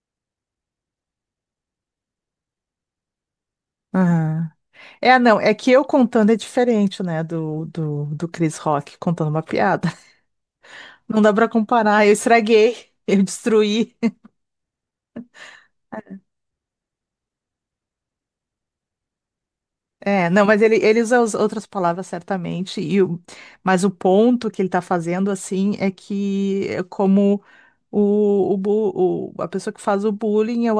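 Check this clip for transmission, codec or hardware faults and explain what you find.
No transmission, codec or hardware faults can be heard anywhere in the recording, and the speech signal stays steady and intact throughout.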